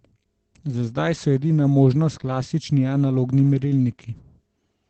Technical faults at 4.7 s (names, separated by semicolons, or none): Opus voice compression